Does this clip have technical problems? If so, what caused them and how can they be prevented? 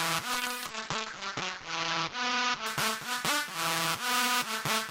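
Yes. A call bitrate drop runs from 0.34 to 3.96 s. The bandwidth estimate fell, forcing the encoder to code far more coarsely, which fits a fall from 64 to 8 kbps. The top end narrows from 20 kHz to 8 kHz, and the sound turns rough and muffled, worst for about 1.3 s, before recovering. Keeping the link uncongested, or giving the call traffic priority, would stop the estimate from collapsing.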